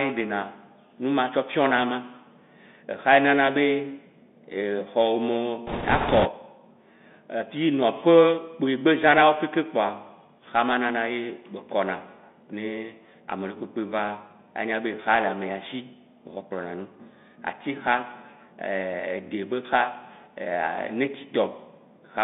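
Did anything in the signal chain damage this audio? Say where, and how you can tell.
Yes. At the codec stage, a Bluetooth CVSD headset codec runs throughout: the speech sits in a narrow band around 200 Hz to 3.6 kHz, with a granular hiss underneath and scratchy s sounds. A spectrogram shows nothing above the band edge. The one-bit delta coding, which fits a 64 kbps link, can't keep up with fast transients.

At the network or radio stage, bit errors on a Bluetooth voice link appear from 5.67 to 6.28 s as a rushing, crackly noise without sharp clicks. The waveform shows dense fuzz that follows the speech level rather than spikes, and the spectrogram shows a smear across the speech band there. The error rate is high, around 7 percent.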